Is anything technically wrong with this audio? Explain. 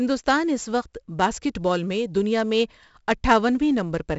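Yes. Throughout the speech there's 4-bit ADPCM compression: each sample is coded as a coarse step from a prediction, so a gritty hiss rides on every loud syllable, attacks smear, and nothing above 7.7 kHz survives, which fits a 64 kbps stream.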